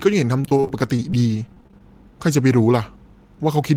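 From 0.41 s to 1.81 s the speech turns choppy, with small pieces of sound dropping out. This is repeated packet loss (robotic sound). More than twenty short gaps arrive in quick succession, the longest about 36 ms. Each is bridged by stretching the last received sound, about 325 ms of fill in total and roughly 23% of the stretch, while about 190 ms is simply missing.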